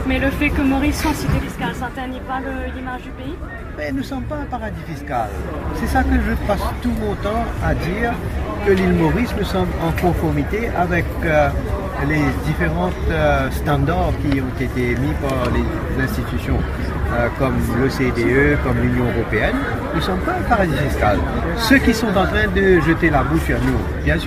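No technical faults are audible.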